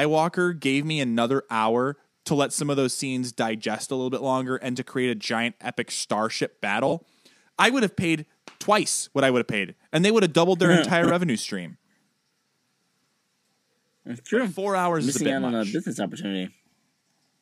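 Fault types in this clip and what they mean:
frames out of order: Two neighbouring blocks of coded audio are decoded swapped, so a stretch plays with its halves exchanged, heard as a garbled flutter: after "a giant epic starship", before "revenue stream", and at 12.87 s. Unlike a dropout, no time is lost.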